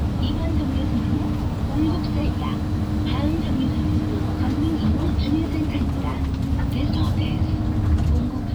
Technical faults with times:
2.27 compressed frames skipped
4.94 compressed frames skipped
6.89 compressed frames skipped
8.21 compressed frames skipped

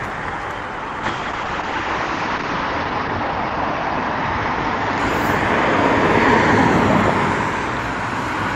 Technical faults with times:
1.09-5.17 call bitrate drop

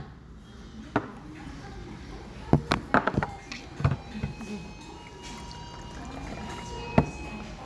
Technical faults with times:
none

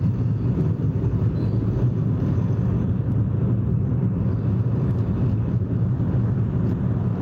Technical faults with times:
0.00-7.22 gain pumping

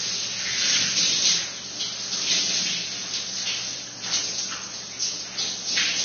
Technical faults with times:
0.00-6.05 Vorbis compression

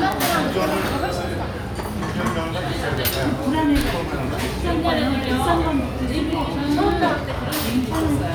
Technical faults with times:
0.12-8.34 word clock ticks

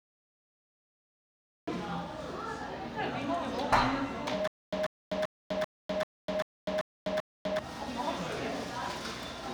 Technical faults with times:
0.00-1.67 cut-off start
4.48-7.59 stutter with silent gaps

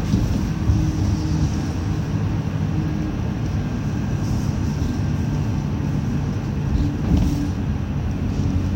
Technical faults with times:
none

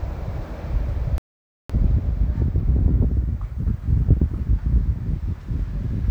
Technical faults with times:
1.18-1.70 playback stall

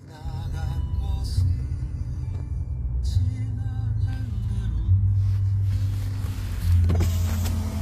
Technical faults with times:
0.00-7.82 HE-AAC compression

